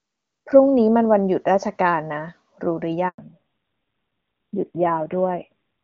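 A handover gap opens at 3.08 s and lasts 100 ms, until 3.18 s. The speech cuts off abruptly and leaves a short hole of silence. This is what happens when a phone call is passed from one network link to another and no speech frames reach the listener during the switch. Whatever was said in that tenth of a second is simply missing, not muffled.

A fallback to narrowband follows from 3.18 s to the end of the clip. Before the gap, the speech has the open, airy quality of HD Voice, consistent with AMR-WB running near its top rate with little audible coding damage. After the gap, everything above 4 kHz is gone, so sibilants and breathiness lose their crispness and the speech sounds duller and rougher. That pattern points to the call having dropped to AMR narrowband at a modest rate, around 7.4 kbit/s.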